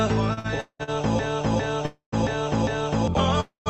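Repeated stalls (stutter) run from 0.33 to 0.90 s. Packets were reaching the receiver late, so its jitter buffer emptied four separate times in just over half a second. Each time, the receiver stretched the last sound to cover the wait, about 0.32 s of filler in all, the longest stretch 0.19 s. More than half of that span is concealment rather than real audio, so nothing drops out, but the sound drags and hiccups.

A broken-record loop follows, from 1.19 to 3.08 s: a fragment about 0.40 s long plays four times back to back, identical each pass. The likely cause is a stall upstream of the listener, with the sender repeating the last chunk it held instead of new material. Whatever should have filled that stretch never arrives.

A call audio freeze sits inside the loop at 1.86 to 2.14 s, and a second one comes at 3.40 to 3.68 s. The likely cause is packets held up in transit, leaving the jitter buffer with nothing to play. 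The receiver carries the last sound on as a fading buzz or hiss that dies into silence, about 0.11 s of it in the first and 0.14 s in the second. The audio then resumes where it halted, so each freeze inserts roughly a quarter-second gap without losing material. Throughout, the call path's Opus coding limits the top end to about 8 kHz, which fits a low bitrate around 24 kbps.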